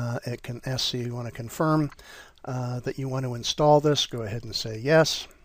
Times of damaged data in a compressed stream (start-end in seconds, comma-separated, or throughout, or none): none